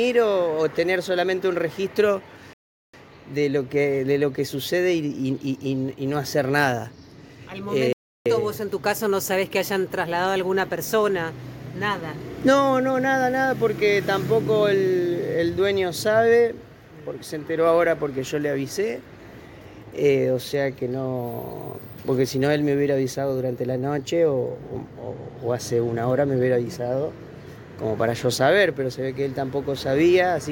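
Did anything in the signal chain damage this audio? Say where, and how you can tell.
Yes, at playback: two rebuffering stalls. The sound drops to silence at 2.53–2.94 s and 7.93–8.26 s, then resumes exactly where it stopped, adding 0.40 s and 0.33 s. The player exhausted its downloaded audio and paused until more arrived.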